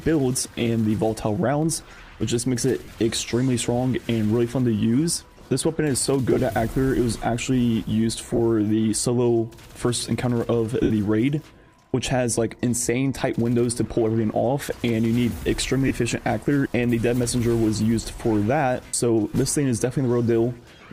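Lost LE Audio frames occur at 0.44, 2.85, 6.32, 8.33, 10.83, 15.88 and 18.86 s. The decoder refills each gap from the last spectrum with scrambled signs, so the sound smears into noise. The gaps at 10.83 and 18.86 s each last 75 ms and fade.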